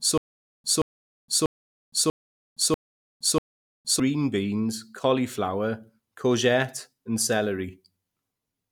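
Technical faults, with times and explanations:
0.00–4.00 s, stutter with silent gaps: the speech is already caught in a loop when the clip begins, as a fragment of about 176 ms plays, then about 465 ms of dead digital silence follows, and the cycle comes round every 641 ms, six times over. The likely cause is a stalled player or stream that, at each retry, replays its last buffered piece and then runs dry, so the audio meant for those gaps is gone.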